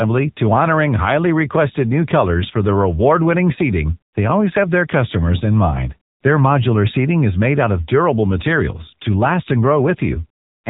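From start to finish the speech carries AMR narrowband mobile codec damage. AMR-NB samples at 8 kHz and rebuilds the voice from a vocal tract model driven by a pitch predictor and a few pulses per 5 ms. Here nothing above 3.8 kHz survives, giving the boxed-in telephone band. The coding damage is plainly audible, a buzzy, synthetic texture on the voice, which fits a low mode around 7.4 kbps.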